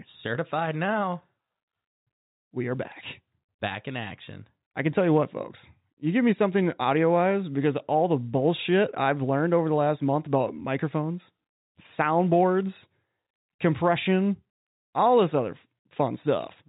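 The speech carries no audible technical faults.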